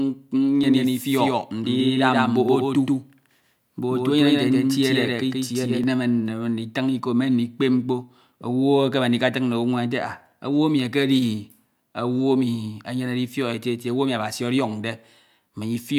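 Speech, with a doubled audio track from 0.64 s to 5.84 s: a second full-band copy trails roughly 150 ms behind at about the same level, with no room colour, and starts abruptly just before "nneme nditin iko me". Likely a slower second capture path.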